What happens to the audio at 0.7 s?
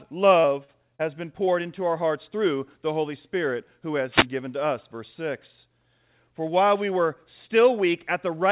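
Right around there, from about 0.64 to 0.70 s, there's a short concealed packet loss. Roughly 40 ms of audio never arrived, so the receiver patched the gap by stretching out the preceding sound and then blending back in. You hear it as a quick smear or little wobble in the speech.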